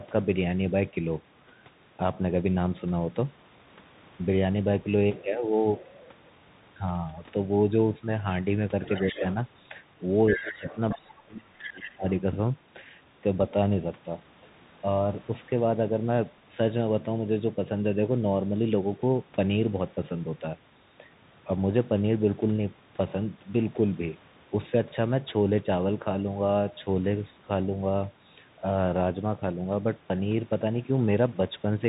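Throughout, the Bluetooth CVSD headset codec narrows the speech to a telephone band with nothing above 4 kHz, leaving an empty upper spectrogram. Its one-bit, 64 kHz delta steps cannot keep up with loud, bright sounds, so sibilants turn scratchy over a steady granular hiss.

From 8.86 to 9.34 s a second voice can be heard under the talker, about 10 dB down. This is the other side's voice leaking through, likely because the echo canceller did not fully remove loudspeaker sound from the microphone. On a spectrogram it shows as faint overlapping harmonics. It returns from 10.27 to 11.01 s, only about 5 dB below the talker, and again, fainter at about 15 dB down, from 11.58 to 11.9 s.

In the same stretches the talker's own speech dips. At 9.11 to 9.23 s the drop is slight, a few decibels over a few tens of milliseconds. From 10.36 to 10.67 s it drops by about 20 dB. From 10.96 to 12.04 s it falls by about 30 dB for roughly a second and nearly cuts out. 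This is speech suppressed in double talk. The likely cause is the echo canceller turning everything down while both sides spoke at once. The waveform shows these as sudden notches in the envelope.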